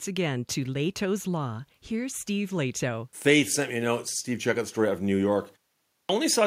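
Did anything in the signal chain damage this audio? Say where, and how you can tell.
Yes. The playback device let its output sleep during the 0.33 s pause and was slow to wake, giving a clipped start after a pause: at 5.82 s speech bursts abruptly out of silence, its first 272 ms missing until 6.09 s.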